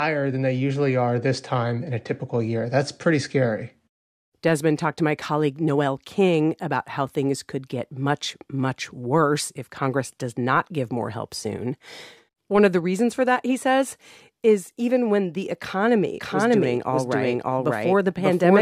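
At 16.2 s, just after "even when the economy", a doubled audio track starts abruptly and runs to the end. A second full-band copy trails by around 0.7 s at much the same level, likely from a slower capture path. The waveform and spectrogram show overlapping, offset speech patterns without any decay.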